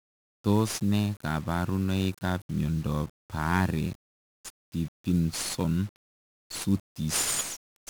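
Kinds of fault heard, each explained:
1-bit DFPWM compression: every sample becomes a single bit nudging a running level up or down, so heavy broadband noise sits over the speech the whole way through, fuzzy and crackly, treble drowned in hiss, which fits a 48 kbps stream.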